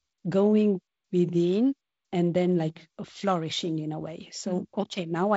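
Nothing in this speech recording stood out as a problem on listening.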